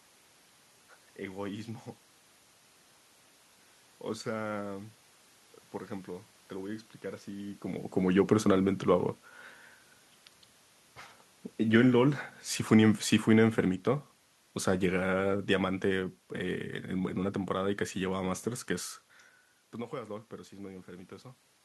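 It's a speech recording with one real problem: automatic gain falling from 11.63 to 14.16 s, where the gain control decides the input is too loud or its background noise too strong and eases its gain down by about 3 dB. The voice and the room noise underneath it sink together. That shared drop in the background is the giveaway that it's the system and not the talker, unlike the level shifts around 7.5 s and 19 s, which are just the talker moving relative to the mic.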